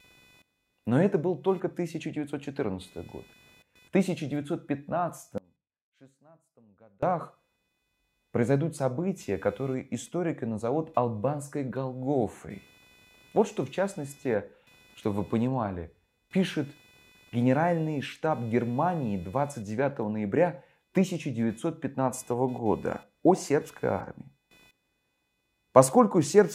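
A speech recording with two faults. Computer activity noise buzzes faintly throughout, pulsing around 500 Hz. It follows processor and peripheral load on the shared ground, not the speech. From 5.38 to 7.03 s there is an audio dropout to a faint residue. The speech cuts abruptly for about 1.65 s. Only a faint leak remains, roughly 30 dB down. The cause is likely a lost signal feed while the downstream path stayed live.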